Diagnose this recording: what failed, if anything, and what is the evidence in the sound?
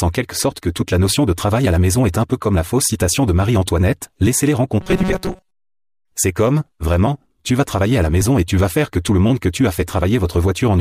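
At the driver or buffer stage, new audio likely arrived too seldom between 4.81 and 6.12 s, so the software filled each gap by replaying its last short block while the real audio was skipped. The result is robotic sound from repeated short buffers. For most of that stretch the speech becomes a rigid, metallic buzz at 188 Hz. That fixed pitch fits a repeated block of about 5.3 ms.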